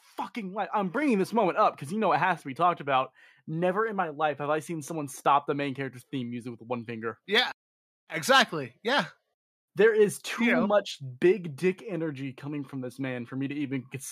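At about 1.02 s, between "fucking life I'm" and "this moment up because", the microphone volume is stepped up. The call software judged the input too quiet and raised the device's input level in a single jump of about 5 dB. Nothing fades in. The voice and the background noise get louder together, at the same instant, mid-sentence. From that point on the speech sits noticeably higher than before.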